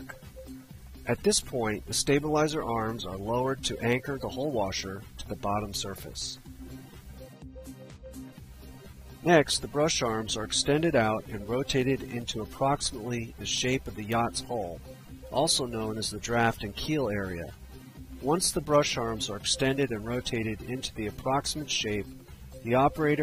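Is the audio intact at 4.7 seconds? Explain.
Yes, at 4.7 seconds the audio is intact, with no dropout, click, distortion or other fault to be heard there.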